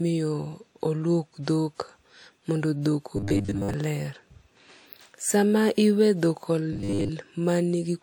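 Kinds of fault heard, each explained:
Robotic sound from repeated short buffers: From 3.17 to 3.74 s and again from 6.73 to 7.10 s the speech turns into a stiff, metallic buzz at a fixed 100 Hz. It still loosely tracks the speech. The likely cause is audio arriving too slowly, with the playback filling the gaps by looping a fragment of about 10 ms. That fragment replaces most of the real audio in those stretches.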